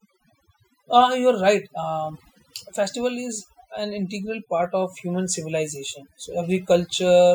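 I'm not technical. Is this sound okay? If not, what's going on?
No, not quite. The whole speech clip, start to finish, has overdone noise removal. Someone ran a noise-cleaning tool too hard on a noisy recording. It switches off bits of the sound it mistakes for background noise, and it takes the quieter parts of the voice along with them. So the gaps go quieter and break up into little twinkly specks.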